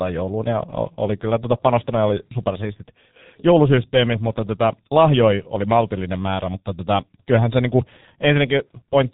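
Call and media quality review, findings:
Whole clip, speech: G.723.1 codec damage, heavy. Muffled, hoarse voice, consonants smeared, nothing above 3.8 kHz. Low-rate telephony codec in the path, running around 6.3 kbit/s by the sound of it. Long 30 ms frames and a slowly updated voice model mean fast transitions get averaged away, so plosives and sibilants blur and the timbre goes rough. Narrowband cap explains the dullness. Check which leg negotiates G.723.1 and whether a wider codec is on offer.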